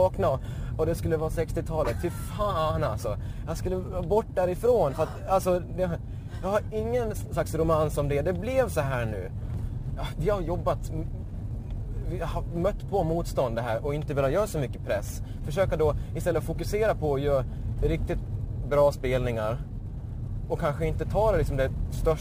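From start to finish the audio carries imaging from sample-and-hold upsampling. Each sample was simply repeated to reach the higher rate, with no smoothing filter, so a mirrored copy of the spectrum folds upward. It fills roughly 12 to 24 kHz, about 28 dB below the signal, which points to a 24 kHz source raised to 44.1 kHz. It sounds like a thin metallic fizz that tracks the level. A spectrogram shows an inverted reflection above 12 kHz, and the waveform shows stair-stepped samples.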